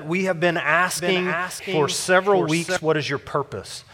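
From 0.97 s to 2.77 s the audio is heard twice, with a second full-band copy trailing roughly 0.7 s behind and about 5 dB quieter. It has no decay or room colour and cuts in and out abruptly. This doubled audio track is likely from the sound being captured again through a slower path.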